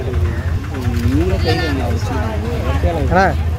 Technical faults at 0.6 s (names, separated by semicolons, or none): damaged data in a compressed stream